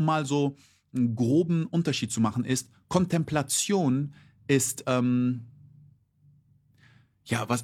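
No technical faults can be heard anywhere here.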